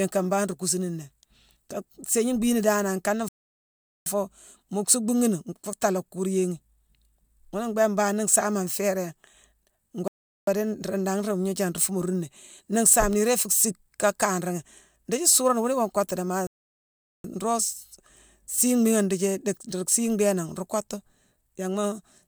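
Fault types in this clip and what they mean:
Rebuffering stall: The player ran short of downloaded audio and waited for more. The speech drops to silence three times, after "danane nkane" for about 0.78 s, then 0.4 s and 0.77 s later on. Each time it picks up exactly where it stopped. Nothing is lost, only time added.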